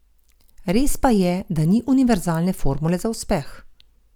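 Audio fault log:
Nothing stood out on listening to the speech in this clip.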